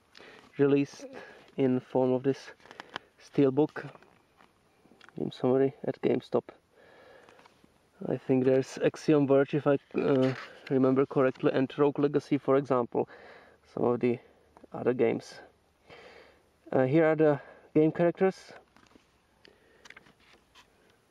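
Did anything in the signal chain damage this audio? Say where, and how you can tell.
No, nothing audible points to damage at any stage of the chain.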